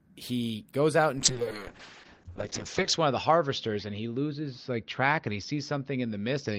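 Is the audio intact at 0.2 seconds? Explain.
Yes, the speech at 0.2 seconds is intact, with no fault to be heard at that moment.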